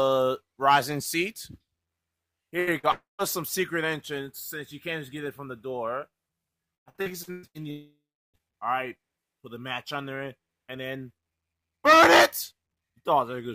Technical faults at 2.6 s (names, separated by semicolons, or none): burst of packet loss